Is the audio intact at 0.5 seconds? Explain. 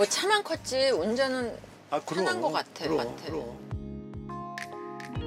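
Yes, the audio is intact at 0.5 seconds, with no audible dropout, click, distortion or other fault at that point.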